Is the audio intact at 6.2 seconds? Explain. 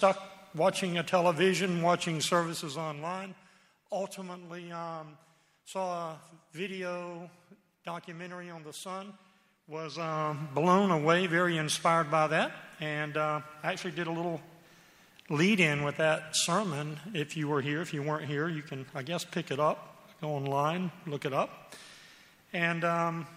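Yes, the audio at 6.2 seconds is intact, with no fault at that moment.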